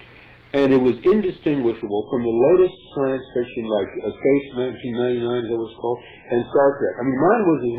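From 1.82 s to the end of the clip, the audio abruptly turns dull and smeared, with nothing left above about 3.8 kHz and a watery, swirling texture of codec artefacts, yet with no gap at the switch. That is an adaptive stream at a lower bitrate: a slowing connection made the player drop from a rendition that sounds like 128 kbit/s MP3 to one that fits roughly 8 kbit/s, and it stayed there.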